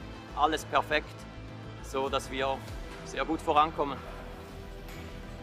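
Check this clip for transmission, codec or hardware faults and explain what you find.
Nothing in the transmission, codec or hardware chain stands out as faulty, and the signal stays steady and intact throughout.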